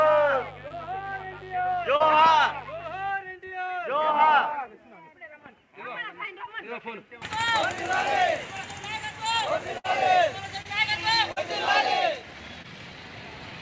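From 0.0 to 3.1 s a mains buzz sits under the audio, around 20 dB below it. Switching spikes at twice the 50 Hz mains rate carry harmonics up into the kilohertz range, giving a raspy rather than a smooth hum, and it stops at 3.1 s.

Short concealed packet loss occurs at 0.68 and 1.96 s, inside the buzz. The receiver patched holes of about 25 and 35 ms by extending the preceding sound, then blended back. Each is heard as a brief smear, with 20 and 40 ms of real audio lost.

At 9.78 s comes a burst of packet loss. This gap is longer, about 61 ms, and the receiver fades its continued sound out across it. The result is a held buzz or dying hiss rather than a quick smear, with about 60 ms of audio skipped before playback resumes.

Further short concealed losses fall at 10.62, 11.32 and 12.62 s, with fills of about 28, 41 and 18 ms. The one at 10.62 s also drops a few milliseconds outright. All are brief wobbles, too short for the fading heard in the burst. 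Throughout, the call path leaves nothing above 8 kHz, consistent with a wideband codec such as G.722.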